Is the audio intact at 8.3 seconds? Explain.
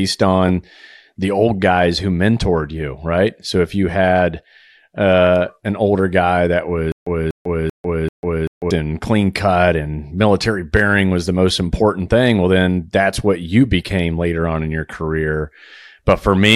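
No. From 6.92 to 8.71 s a stutter with silent gaps: a 243 ms burst repeats four times, each followed by 146 ms of digital silence, likely from a stalled stream replaying its last fragment.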